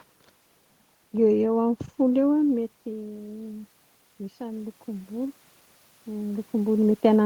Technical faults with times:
2.48-3.78 automatic gain rising

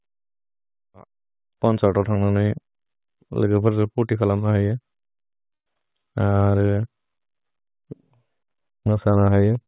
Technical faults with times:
5.54-5.68 call audio freeze
5.74-5.77 skip ahead
5.86-6.11 jitter buffer slow-down

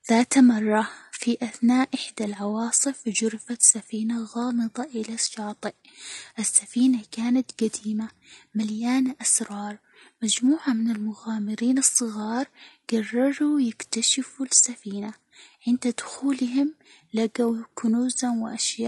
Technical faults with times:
0.00-18.88 low-delay AAC compression

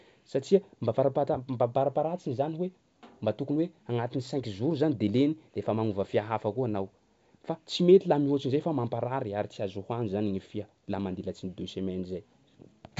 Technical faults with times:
none

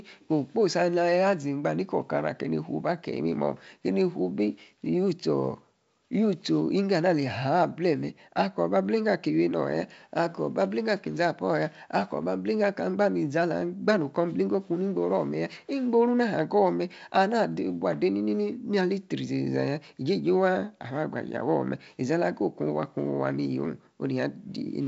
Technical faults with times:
none

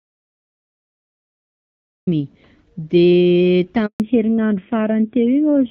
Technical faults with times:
0.00-2.07 audio dropout to silence
3.86-4.00 handover gap
4.00-5.70 fallback to narrowband

